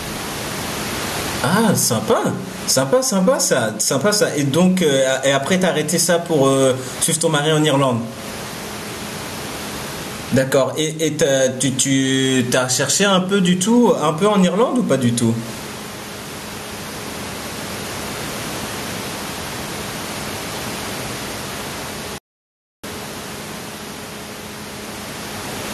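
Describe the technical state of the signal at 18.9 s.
At 18.9 s the speech shows gain pumping, which runs through the whole recording rather than starting or stopping there. The room noise sits about 29 dB below the speech, and the level swings by around 15 dB. The likely cause is input gain set far too high, with a fast limiter or compressor clamping down on every peak, leaving the speech squashed and flattened in dynamics.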